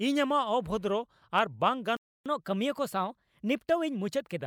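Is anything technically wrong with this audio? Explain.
Yes, there are two related faults.

At 1.97 s the speech cuts to silence for about 0.29 s, resuming at 2.26 s from where it stopped. This playback stall likely came from the player running out of buffered data, or its thread being blocked, before output could continue.

From 2.26 s to 4.40 s the speech runs about 1.1 times fast and sits roughly one and a half semitones high, then settles back to normal. This is catch-up at higher speed: the player resamples its backlog to recover the time lost in the stall.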